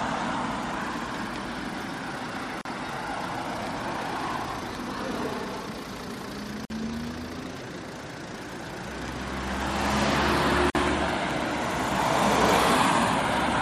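At 2.61, 6.65 and 10.70 s, a gap at a join of encoded pieces cuts the sound for 38 to 49 ms. Separately encoded four-second pieces keep their padding silence, so the audio drops abruptly, then resumes where it stopped.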